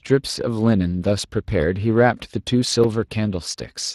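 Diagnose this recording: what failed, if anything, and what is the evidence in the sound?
The codec stage failed: the speech has been through the Speex codec, and the damage is plainly audible for the whole clip. It sounds hoarse and grainy, with a buzzy edge where too few bits describe the excitation. Nothing reaches above 15.5 kHz. The degradation fits a setting in the low twenties of kbps. Unlike network packet loss, the damage is steady rather than arriving in bursts, and nothing repeats or stutters.

At 2.84 s the driver or buffer stage drops out: a block of digital silence about 5.3 ms long is heard as a sharp tick rather than a gap. The signal cuts out and returns with no fade. That length fits a 256-sample buffer left unfilled in time. Unlike a codec dropout, which is concealed with smeared sound, this is a true hole.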